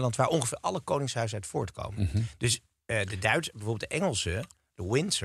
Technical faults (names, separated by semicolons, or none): none